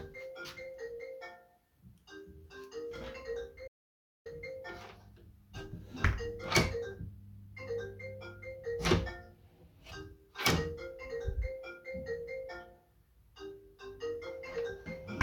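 A recording of sounds that cuts abruptly to dead silence at 3.68 s and snaps back at 4.26 s, a gap of about 0.58 s with no room tone at all. This audio dropout to silence is likely a momentary loss of the input while the recorder kept writing silence.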